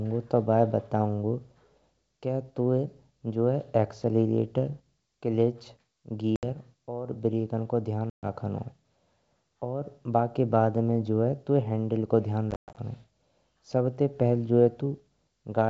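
Speech on a G.722 wideband call, clear up to about 7 kHz. It suffers packet loss on an ADPCM call. Hard silent gaps fall at 6.36 s (70 ms, just before "और ब्रेकन को") and at 8.10 s (130 ms, just after it). A third comes at 12.51 to 12.77 s, with 180 ms lost in scattered bursts and a longest run of 120 ms. The missing packets are filled with silence. The receiving decoder's predictor and step size drift from the sender's. Speech returns slightly distorted before settling.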